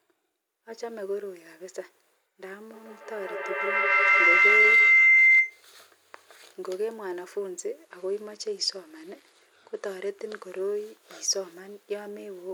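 From 2.73 to 5.68 s a piercing tone near 2 kHz swells out of the speech, climbing to about 12 dB above it and pulsing roughly every 150 ms. This is a feedback howl: two devices in the same room are on the call, so sound leaves one loudspeaker, re-enters a microphone and comes back louder on each pass. The repeats narrow to the frequency the loop favours and keep growing until the loop breaks.

Between 7.84 and 10.60 s the speech loses its brightness, and a gritty, grainy noise rides underneath it until the sound recovers. That points to a Bluetooth SBC bit pool drop. On a congested link the phone cut the bit pool to keep the audio flowing, which fits a fall from around 31 to 14, near 99 kbps. The top sub-bands were starved of bits and the remaining bands were coarsely quantised.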